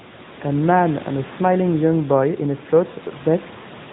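Throughout, the speech has passed through an AMR narrowband mobile codec, likely at around 10 kbps, cutting everything above 4 kHz and leaving a plainly buzzy, synthetic tone, with the faint room noise swirling.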